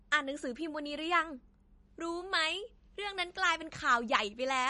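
Throughout the speech, plainly audible watery swirling and nothing above 10.6 kHz point to likely MP3 compression, fitting a starved bitrate near 40 kbps.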